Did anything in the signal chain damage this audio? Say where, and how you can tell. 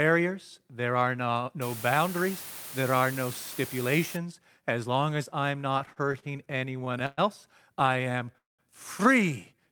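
Yes. Low bit depth with dither runs from 1.6 to 4.2 s, introduced at a sample-format conversion stage. The sound drops to an effective 6 bits, and instead of gritty distortion you hear a flat, constant hiss sitting about 15 dB below the speech. That even, signal-independent noise is the signature of dither: random noise was added before rounding to so few levels, turning the quantisation error into steady white noise.

Repeated stalls (stutter) appear in two bursts, a network and jitter-buffer problem. From 5.79 to 7.20 s there are 16 short hold-ups totalling 300 ms, about 21% of that stretch, the longest 116 ms. From 7.80 to 8.36 s there are 9 more, totalling 84 ms, none longer than 16 ms. Each time the buffer ran dry, the receiver stretched the last sound until data resumed. Nothing is lost, but the speech drags and stutters.

Call audio freeze hits right after, from 8.38 to 8.61 s. The sound is held for 206 ms, most of it (180 ms) fading into silence before the speech picks up exactly where it stopped, now running 206 ms later than before. 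The cause is likely packets held up in transit long enough to empty the jitter buffer, with the receiver's concealment filling the wait rather than anything being dropped.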